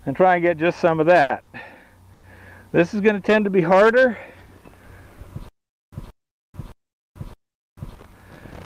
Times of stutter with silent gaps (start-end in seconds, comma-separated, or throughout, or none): 5.49-7.95